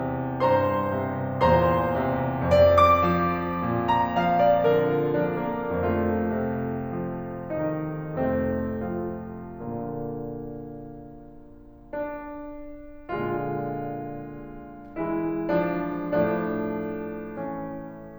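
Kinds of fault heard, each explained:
Nothing wrong turns up anywhere in this bit of music; it just carries on with no glitches to point at.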